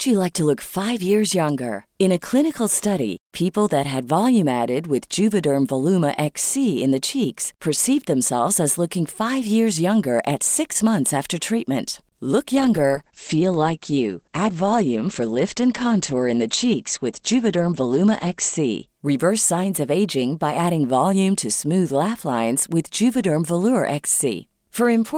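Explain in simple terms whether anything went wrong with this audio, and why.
A call bitrate drop hits from 12.56 to 18.93 seconds. The call's connection looked weaker, so the speech was squeezed into far fewer bits. It sounds coarser and muffled, with the crisp upper range missing, until the quality returns near 18.9 seconds.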